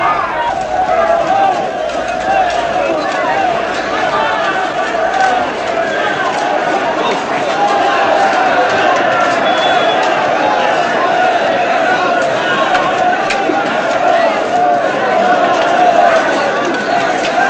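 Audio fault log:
15.79–16.08 s, hard clipping: a brief patch of gritty crackle on the loudest peaks. The signal overran the level one stage could pass by about 2 dB, so those peaks were sliced flat, and the squared-off tops sprayed harsh high harmonics.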